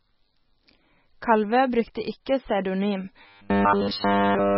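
Throughout, the speech sounds watery and swirly, with heavy damage likely from MP3 compression at a very low bitrate. A spectrogram shows nothing above 5.6 kHz and flickering patches.

From 3.22 s to 4.57 s, a rigid 100 Hz buzz appears, likely robotic sound from repeated short buffers of about 10 ms. The waveform shows near-identical cycles repeating.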